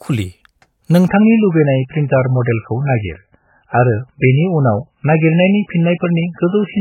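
Speech, with an adaptive stream switching to a lower bitrate at 1.08 s and staying there to the end. The switch is abrupt and leaves no gap. From that point nothing is heard above 3 kHz, so sibilance and air vanish and the voice turns dull and band-limited, with coarse MP3 coding artefacts. The sound points to the player dropping from a 128 kbit/s MP3 rendition to one near 8 kbit/s when the connection slowed.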